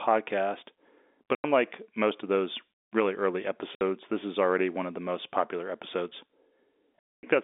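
At 1.35 s there's a 90 ms dropout just before "unlike most of those", then a 60 ms one from 3.75 s between "of those really early" and "this is already one", and a longer 240 ms hole from 6.99 to 7.23 s. That's packet loss filled with silence: packets went missing and the receiver played dead air in their place. The gap lengths all fit a 30 ms packet size. Each hole starts and stops abruptly, and all of it sits on a narrow telephone band from the G.711 line.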